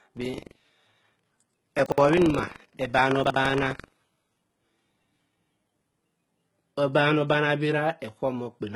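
Throughout the speech, s sounds are gritty and lispy, and nothing appears above 11.8 kHz. This is likely HE-AAC compression at a very low bitrate, with treble rebuilt by band replication, so the spectrogram shows smeared, misaligned upper harmonics.

From 0.0 to 6.13 s, buffer tearing makes a robotic 23.4 Hz rattle, which fits a 2048-sample buffer. Roughly 5% of each period replays audio about 150 ms old, and the waveform shows regular hard splices.

Chunks play out of order at 1.86–1.98 s, 3.24–3.36 s and 4.44–4.56 s. Each time, a 60 ms chunk arrives one chunk late and swaps places, producing a jumbled moment with visible discontinuities at the three joins.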